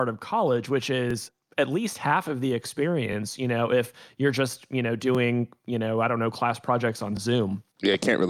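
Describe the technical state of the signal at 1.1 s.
Overlapping chunks occur between 1.11 and 1.13 s, after "of college which" and before "at least half of". Each new chunk begins about 21 ms before the previous one ended, so that sliver of speech plays twice at the join, heard as a brief click-like stutter.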